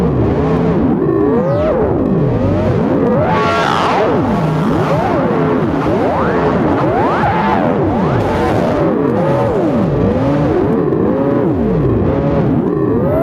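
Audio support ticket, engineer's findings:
Gain pumping throughout. Gain ducks by around 10 dB under each loud event. Likely cause: input gain set far too high, with a fast limiter or compressor clamping every peak. Dynamics squashed, loud and quiet parts closer in level.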